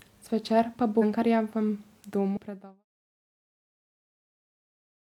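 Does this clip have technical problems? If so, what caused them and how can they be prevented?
Yes: compressed frames skipped at 0.98 s and at 2.33 s, just before "predaval na temo". Whole frames, apparently about 46 ms each, went missing or were rejected as damaged, so the sound jumps ahead by roughly 300 ms and 150 ms. To prevent it, check file integrity after transfer and re-encode from an undamaged source.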